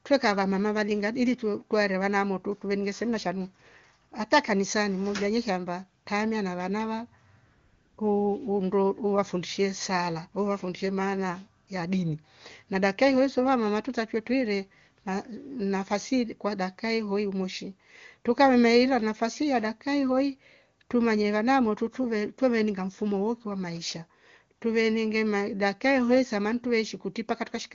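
AMR comfort noise cuts in at 4.09 s, 6.03 s (after "modha ye shamba"), 7.45 to 7.97 s, 11.65 s and 24.59 s. Speech frames stop for 20 ms, or 520 ms in the longer gap, and the receiver fills each pause with a steady, smooth synthetic noise.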